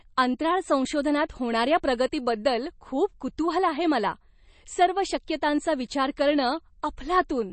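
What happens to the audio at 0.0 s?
At 0.0 s you're already hearing compression damage that runs the whole clip, most likely from MP3. There's nothing above 8.3 kHz, so the top end is cut off flat. The artefacts are plainly audible and fit a low bitrate of around 32 kbps. With so few bits, the encoder drops weak frequency lines that flicker on and off from frame to frame. That gives a watery or swirly quality, metallic chirps on s sounds, and smeared attacks.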